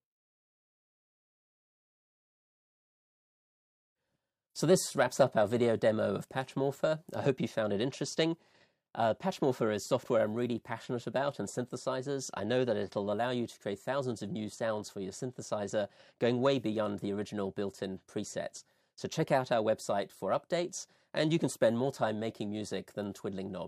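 Nothing here stands out as a technical problem; the audio just runs along with no audible glitch, dropout or distortion to point to.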